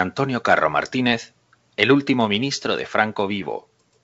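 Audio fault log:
2.36 s, bit errors on an ADPCM link: a short pop with a rough burst and a brief change in level. Flipped bits, at an error rate of around 0.2 percent, knock the G.722 decoder's step size and predictor off track, so the damage rings on briefly.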